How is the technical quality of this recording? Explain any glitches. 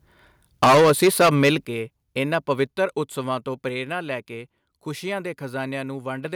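The recording has clear technical faults: overload distortion in the first second and a half, and two abrupt drops in microphone level.

From 0.62 to 1.54 s, microphone overload drives peaks about 14 dB past the converter's ceiling, likely from excessive input gain. Roughly a fifth of samples flatten, giving harsh crackle. The waveform shows squared-off tops and the spectrogram shows smeared high harmonics.

At 0.64 s and again at 1.65 s, the microphone volume stepped down, by about 2 dB and then about 8 dB. These were likely automatic gain cuts reacting to the clipping. Speech and background drop suddenly, visible as abrupt amplitude steps in the waveform.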